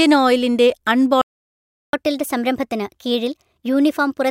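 At 1.22 s the speech just cuts out and stays silent until 1.93 s, so you get a dead gap of roughly 0.72 s right in the middle of the flow. That's a playback stall: the output went quiet because the player most likely ran dry on data or had its thread held up, and nothing came out until it got going again. It doesn't sound like a natural pause, since the speech stops abruptly mid-stream rather than trailing off.

Right after it resumes at 1.93 s, you can hear the catch-up at higher speed kick in, and it runs all the way to the end. The player is pushing through its backlog at 1.15 times normal speed by resampling, so everything comes out a bit rushed and pitched up by around two semitones. The voice sounds slightly chipmunky and hurried, and it never settles back to its normal rate before the audio ends.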